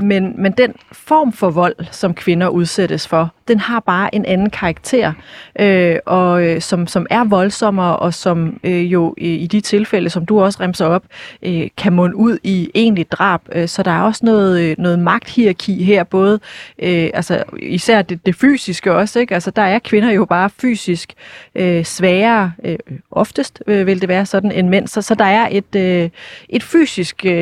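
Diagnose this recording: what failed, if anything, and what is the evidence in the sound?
Nothing in this speech recording points to a failure at any stage of the chain. No event anywhere in the clip calls for a diagnosis.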